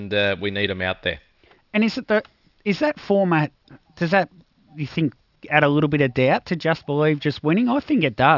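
Throughout the clip, the sample rate was cut without an anti-alias filter first, which fits a drop from 48 kHz to 12 kHz. That is aliasing: content above 6 kHz folds back as false tones, roughly 25 dB below the speech, making sibilants gritty and metallic.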